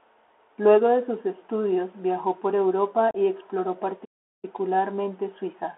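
Speech heard through the narrowband Bluetooth CVSD headset codec. Everything sits between about 300 Hz and 3.4 kHz, which fits a 64 kbit/s CVSD link. The one-bit delta coding cannot follow loud, fast rises, so sibilants turn scratchy and a granular hiss runs under the speech. At 3.11 to 3.16 s, just before "y exploró", there is unconcealed Bluetooth headset packet loss. About 34 ms of audio drops out with hard edges, which points to a run of about ten lost packets. The speech returns briefly quieter as the adaptive step size rebuilds. From 4.04 to 4.45 s, right after "y exploró", the output goes silent for about 386 ms and then resumes. This is a playback stall, likely caused by the player running out of buffered data or its audio thread being blocked.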